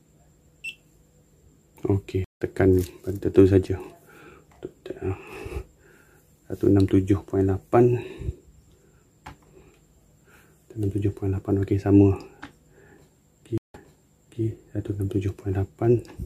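At 2.24 s the sound drops out for 163 ms and returns about a fifth of a second further on. At 13.58 s a 164 ms gap resumes 0.7 s earlier, replaying material. Both are stream reconnects, where the player lost its connection and restarted decoding mid-stream.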